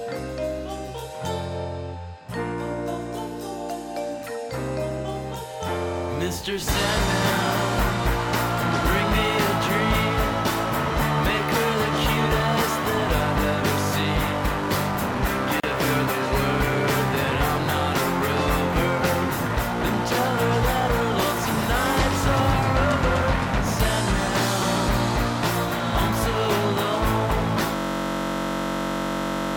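At 15.6 s a brief hole of about 35 ms opens in otherwise continuous sound, its edges softened, before the sound resumes where it left off. This is a gap at a join of encoded pieces: separately encoded sections were spliced without trimming each run's start delay and final-frame padding.

From 27.76 s to the end, a steady buzz at about 47 Hz replaces the sound, as one 21.33 ms fragment repeats over and over. This is a system hang loop: the system froze while the audio hardware kept replaying its ring buffer, which fits a 1024-sample buffer.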